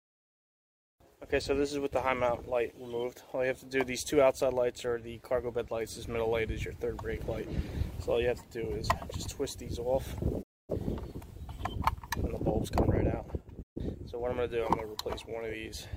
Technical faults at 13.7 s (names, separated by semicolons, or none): digital broadcast dropout